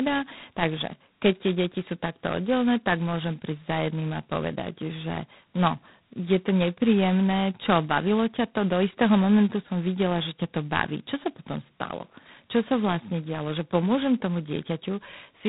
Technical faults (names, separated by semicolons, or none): G.726 ADPCM